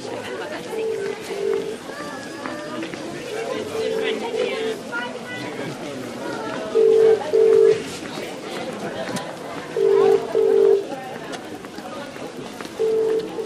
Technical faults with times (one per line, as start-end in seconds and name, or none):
9.72-13.46 Wi-Fi interference